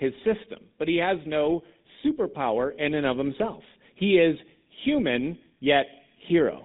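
From start to finish the speech carries GSM full-rate codec damage, plainly audible throughout. The codec rebuilds the voice from a vocal-tract model driven by a regular pulse excitation that keeps only every third sample, giving a buzzy, gravelly roughness to the speech. Nothing is reproduced above about 3.9 kHz, so sibilants and upper detail are missing and the sound is dull and narrow. The character fits the 13 kbps full-rate mode.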